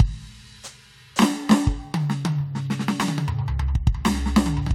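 The music comes through with no audible technical faults at any point in the recording.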